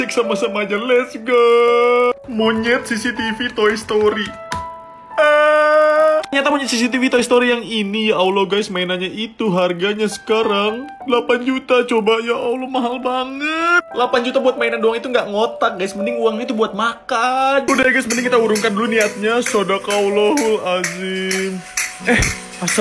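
Throughout, a 50 Hz buzz rides on the sound and stops in silence. It comes from a resampler restarted on every block. Each 20 ms block was converted alone, which fits a 48 kHz to 24 kHz conversion, leaving an error at every block edge.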